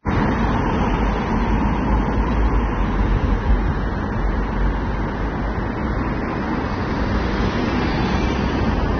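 Throughout, the encoder likely starved the signal of bits: this is AAC compression, and its damage fits AAC-LC at around 24 kbps. Nothing remains above 6.3 kHz, and the coarse quantisation plainly dulls and smears the sound, leaving a warbling, fizzy texture.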